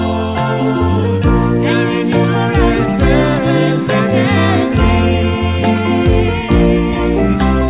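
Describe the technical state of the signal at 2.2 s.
At 2.2 s the audio is intact, with no fault, though it carries the narrow band of a telephone-grade call path, with nothing above 4 kHz, as a G.711-type codec would leave it.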